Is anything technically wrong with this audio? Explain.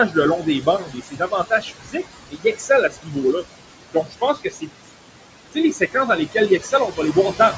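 Yes. Noise suppressor artifacts run throughout: the suppressor pulls steady background down by about 21 dB frame by frame, so the noise sinks between the words and rises under them.

Speech cut by the noise suppressor occurs at 0.39–2.06 s, 2.29–2.70 s, 2.89–3.46 s, 3.94–4.70 s, 5.73–7.16 s (just after "sais les"), and 7.32–7.57 s. The suppressor misreads quieter speech as noise and turns it down by about 15 to 20 dB, so syllables and word endings sound swallowed and faint.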